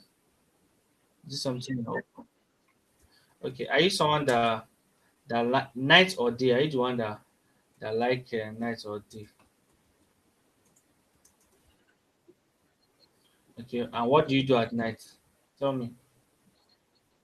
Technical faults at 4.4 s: short stall from a late packet

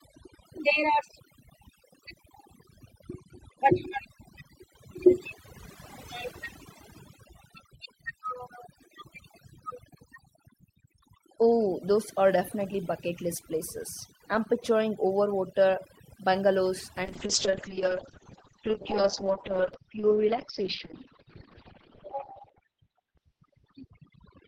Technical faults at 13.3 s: overdone noise removal

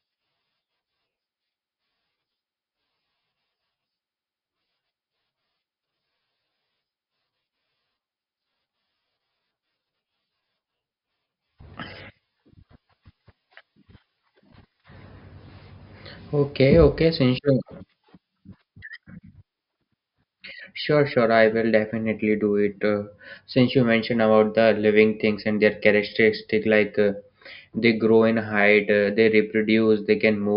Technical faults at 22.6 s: none

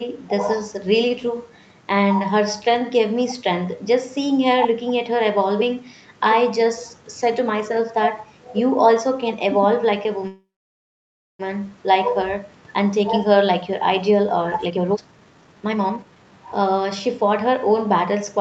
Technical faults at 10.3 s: call audio freeze

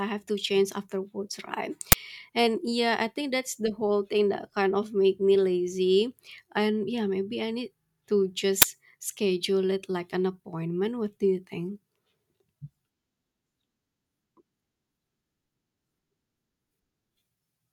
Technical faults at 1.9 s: uninitialised buffer

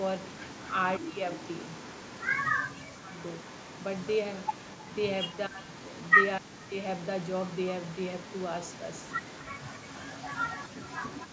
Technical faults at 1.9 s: echo leak

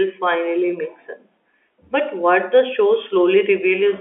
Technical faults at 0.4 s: none

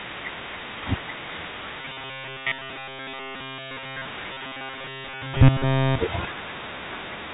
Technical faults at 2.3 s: robotic sound from repeated short buffers

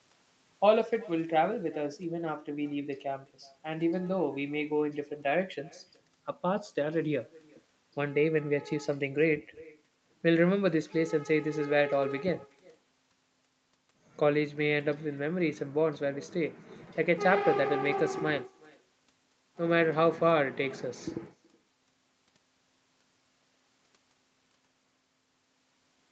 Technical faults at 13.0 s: echo with no canceller

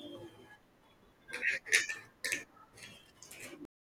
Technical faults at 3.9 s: cut-off end

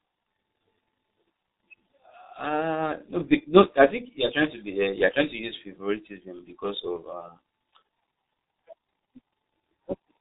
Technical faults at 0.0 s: G.723.1 codec

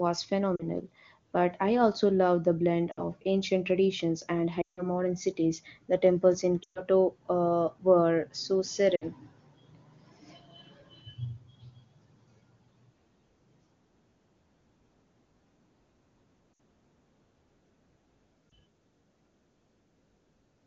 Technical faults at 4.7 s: lost AMR speech frames

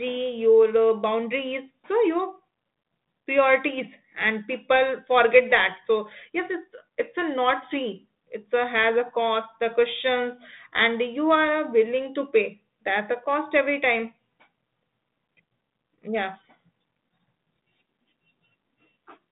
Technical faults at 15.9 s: none

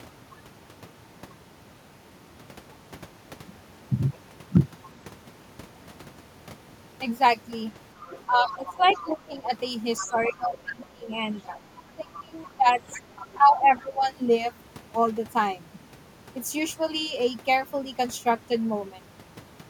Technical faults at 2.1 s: none

